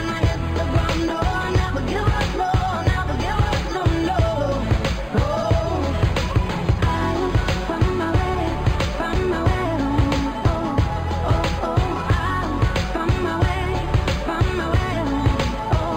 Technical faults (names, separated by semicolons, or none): imaging from linear upsampling